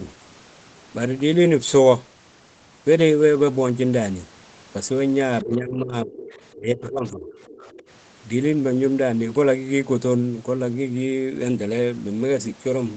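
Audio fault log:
5.44–6.15 s, speech suppressed in double talk: the talker's level sinks by about 20 dB for roughly 0.7 s. This is likely an echo canceller that, with both sides talking at once, could not tell the talker from the loudspeaker echo and turned everything down.
6.15–6.56 s, other side's voice leaking through: a faint second voice, about 20 dB below the talker, comes through. It is likely loudspeaker sound that the echo canceller left in the microphone signal.
6.54–7.28 s, speech suppressed in double talk: a deeper dip of about 25 dB, again lasting roughly 0.7 s, pulls the talker down. This is likely the same overlap confusing the suppressor, which cut both voices together.
7.26–7.9 s, other side's voice leaking through: the far voice returns more weakly, about 25 dB under the talker, within the call's 8 kHz band. This is likely residual echo that escaped cancellation.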